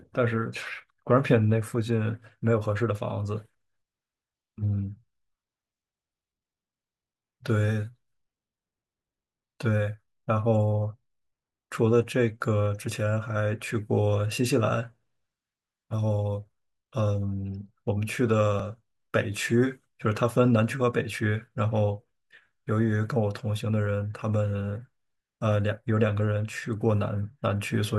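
A speech recording with one dropped buffer (overrun) at 18.60 s. At that point the sound jumps forward slightly instead of pausing. Only a few milliseconds go missing, so no syllable is lost. The cause is likely an overrun in capture. The recording software did not read its buffer in time, and the hardware wrote over it. The audio on either side was then spliced together with no gap.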